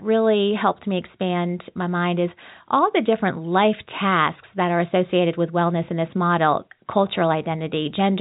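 No technical faults are audible.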